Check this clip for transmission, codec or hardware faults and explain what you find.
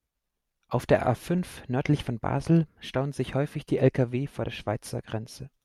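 No transmission, codec or hardware faults are audible anywhere in this speech recording.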